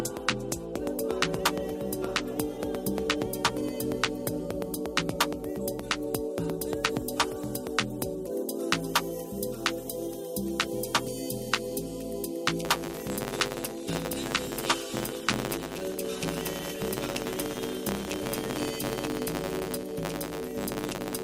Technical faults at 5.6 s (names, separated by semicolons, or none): none